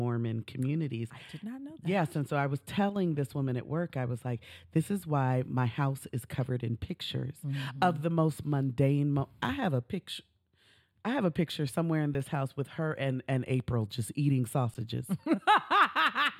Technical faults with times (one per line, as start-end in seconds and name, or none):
2.89-2.96 one channel drops out
12.14 underrun with held sample
14.74 underrun with held sample